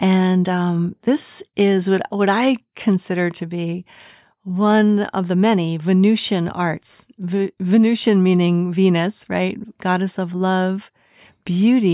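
No technical faults can be heard anywhere in the clip.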